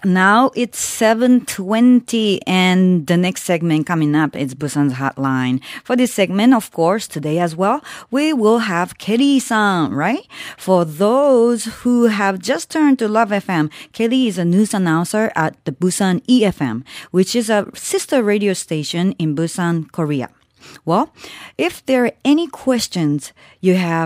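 Nothing stood out on listening to this recording of speech.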